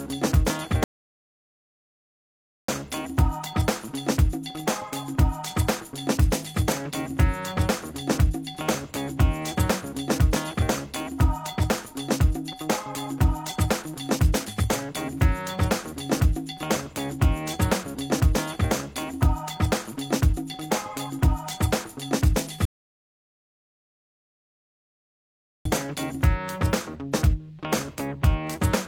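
At 0.84 s the sound drops to silence until 2.68 s, then picks up exactly where it stopped. That is a rebuffering stall: the player ran out of downloaded audio and waited. A second stall runs from 22.65 to 25.65 s. Nothing is lost, but each adds dead time.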